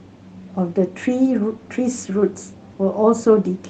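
No technical faults can be heard in this speech recording. It has come through a WebRTC call path with its usual coding noise, and the top end stops at about 12 kHz, which fits an Opus codec running at a moderate bitrate.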